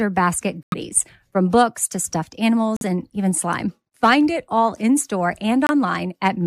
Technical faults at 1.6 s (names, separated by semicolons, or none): none